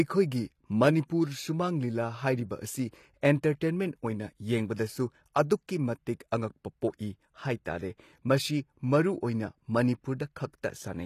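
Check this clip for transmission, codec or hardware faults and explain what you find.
There's one fault, and it runs through the whole speech clip: HE-AAC compression, and it's plainly audible. The top end has that bright but fake quality you get when only the lower spectrum is actually coded and the treble is rebuilt by copying lower bands upward under a rough envelope. The harmonics up there don't line up with the ones below, so s sounds come out gritty and lispy. That points to a low bitrate, something like 24 kbps, as the likely cause.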